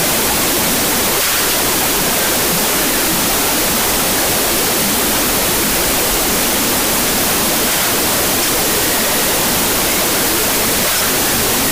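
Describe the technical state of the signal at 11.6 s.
At 11.6 s the clip is still affected by the wrong sample width fault that runs through the whole recording. Data written as 32-bit float are being read as 16-bit integers, so each 4-byte sample is split into two values built from mismatched bytes, and only some of them keep the top bits of the real signal. The result is loud noise with the original sound buried inside it, playing at half speed and an octave low.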